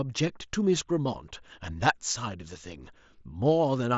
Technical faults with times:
none

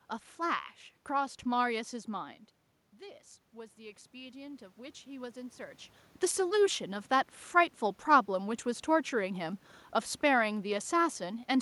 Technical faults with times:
2.09-7.09 automatic gain rising

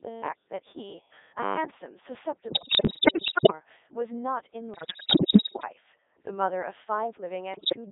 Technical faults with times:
0.00-7.91 Codec 2 vocoder
2.50-3.52 bit errors on digital voice radio
4.74-5.68 bit errors on digital voice radio
7.54-7.76 bit errors on digital voice radio

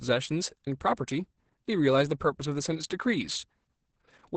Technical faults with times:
0.00-4.37 Opus voice compression

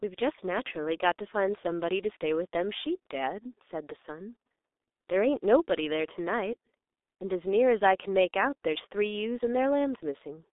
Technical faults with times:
0.00-10.53 G.723.1 codec

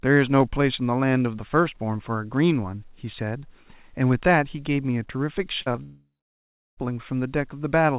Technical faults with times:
5.62-5.79 short concealed packet loss
5.83-6.79 long network dropout

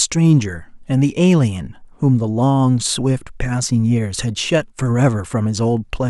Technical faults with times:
none

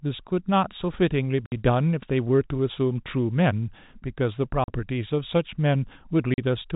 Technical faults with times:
1.46-1.52 packet loss filled with silence
4.64-4.68 packet loss filled with silence
6.34-6.38 packet loss filled with silence

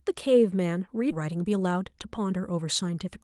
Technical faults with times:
1.11-1.13 skip ahead
1.21-3.05 jitter buffer speed-up

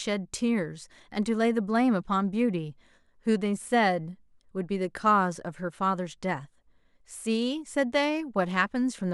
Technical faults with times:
none

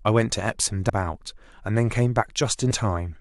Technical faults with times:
0.88 damaged data in a compressed stream
2.70 damaged data in a compressed stream

